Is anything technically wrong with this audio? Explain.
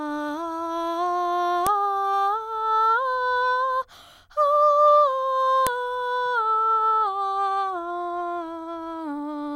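Yes. Sharp clicks at 1.67 s and 5.67 s are a file header played as audio: joined 4-second music pieces kept their WAV headers, which play as a brief burst.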